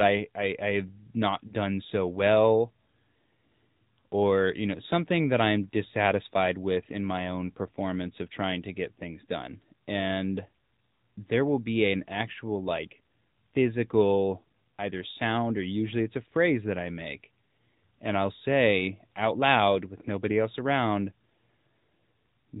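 Speech runs the whole way through with a boxed-in, telephone quality: there is nothing above 4 kHz, and the voice has a buzzy, synthetic edge. That is the sound of the AMR narrowband mobile codec, which rebuilds the voice at 8 kHz from a vocal-tract model fed by a handful of pulses. The damage is plainly audible, and the degree of buzz points to a mid-rate mode of around 10.2 kbps. From about 1.48 to 1.51 s, just before "done so well", the voice briefly dips and wavers, then comes back a little rough. The dip is short, consistent with a single lost 20 ms frame. It is a case of lost AMR speech frames: a frame failed its checksum, so the decoder repeated the last good pitch and vocal-tract settings at lower gain to bridge the gap.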